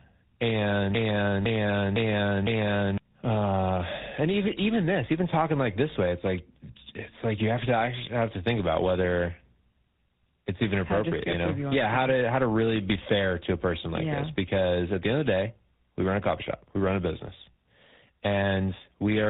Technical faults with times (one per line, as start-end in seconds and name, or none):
0.00-19.29 tandem speech coding
0.95-2.98 broken-record loop